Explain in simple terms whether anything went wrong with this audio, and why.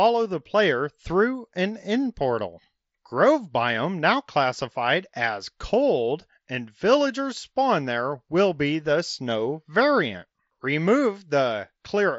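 At 4.58 s, between "biome now" and "as cold and villagers", there is concealed Bluetooth headset packet loss. About 7.5 ms of audio went missing, which fits one lost packet, and the phone filled the gap by repeating a recent stretch of sound, so the glitch is barely audible. The headset's mSBC link carries the speech with its usual slight graininess.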